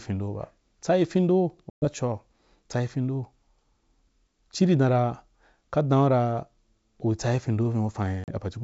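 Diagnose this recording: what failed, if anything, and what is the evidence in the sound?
The network dropped packets on an ADPCM call, which is where this fails. Right after "tsayi findou" there's a hard-edged hole from 1.70 to 1.86 s, about 120 ms gone, several packets' worth. A shorter 40 ms gap, maybe a couple of packets, hits at 8.24 to 8.33 s. Silence fills each gap, and the G.722 decoder's adaptive predictor and step size drift off the sender's. So the sound comes back slightly distorted before settling.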